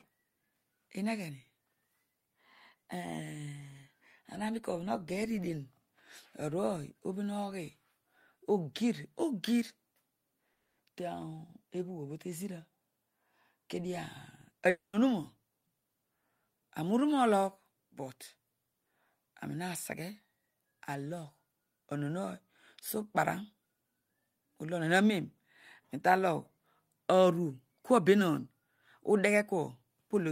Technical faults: long network dropout

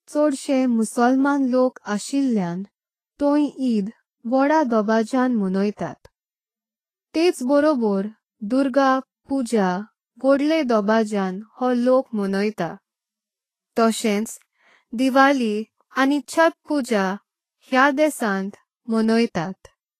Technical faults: Vorbis compression; pre-echo

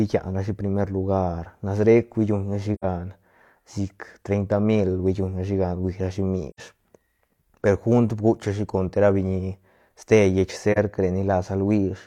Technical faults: AAC frame loss with muting

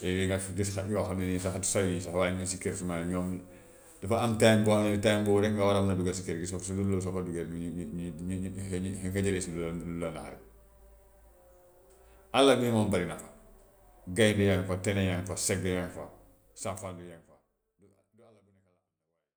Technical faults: none

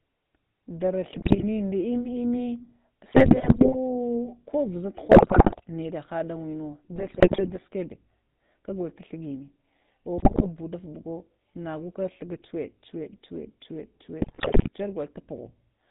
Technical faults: GSM full-rate codec; GSM bit errors

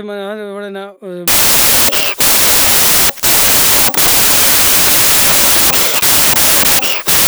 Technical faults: wrong sample width

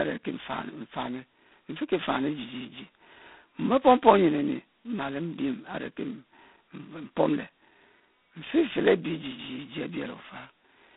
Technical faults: G.726 ADPCM

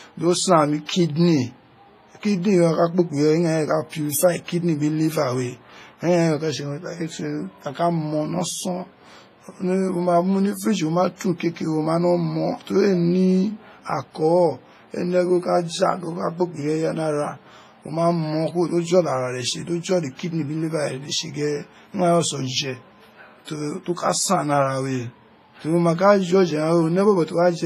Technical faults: WMA compression

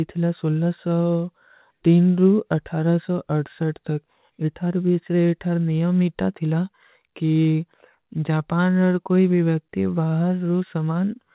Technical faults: none

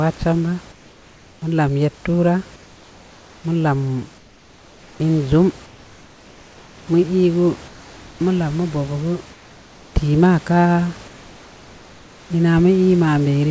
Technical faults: comfort noise in place of the background

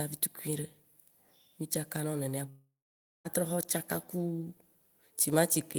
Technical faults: long network dropout

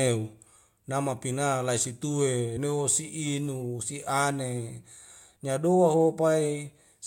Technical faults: compressed frames skipped

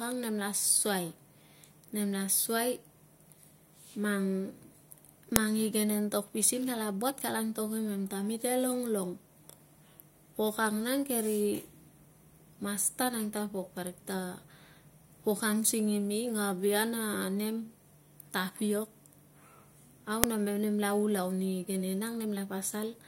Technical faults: file header played as audio

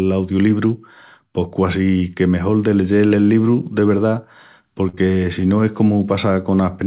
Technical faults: short concealed packet loss

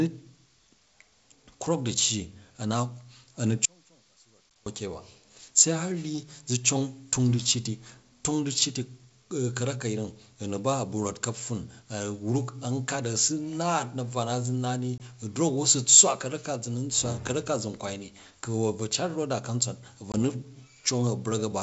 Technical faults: audio dropout to a faint residue; packet loss on an ADPCM call

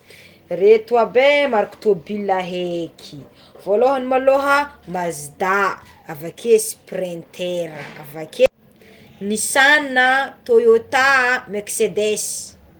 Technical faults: none

